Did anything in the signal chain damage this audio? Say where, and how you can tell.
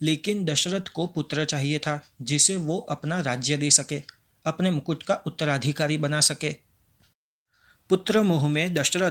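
Yes, at the network stage: a lost packet rebuilt from error correction, 2.97 to 3.03 s. There's no gap in the speech, just a brief rough, noisy patch, which fits two dropped packets, about 40 ms, replayed from the low-bitrate backup copies Opus carried in later packets.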